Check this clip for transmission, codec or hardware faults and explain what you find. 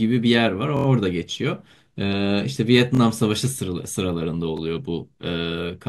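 Three short stutters in the speech, at 0.77 to 0.86 s, 2.95 to 3.00 s and 4.57 to 4.60 s, are a repeated buffer fault. Each is a 23 ms fragment played again with a hard join: four extra times in the first, twice in the second, once in the last, giving a brief stutter. New audio arrived late, so the device replayed its last block, which fits a 1024-sample buffer. Almost nothing is lost; speech resumes where it paused.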